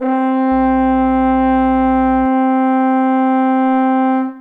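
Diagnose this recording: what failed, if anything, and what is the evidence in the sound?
Mains hum is the culprit, and it's in the analogue wiring: from 0.52 s to 2.26 s there's a steady 60 Hz tone, sitting roughly 20 dB under the sound. That points to a ground loop or nearby transformer bleeding the power line into the signal path.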